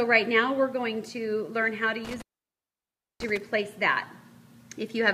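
At 2.05 s an intermittent contact opens: a loose cable or plug briefly breaks the signal path, so the sound cuts out for about 0.99 s until 3.37 s. Crackle marks both edges and faint hiss remains underneath, unlike a digital dropout's clean silence.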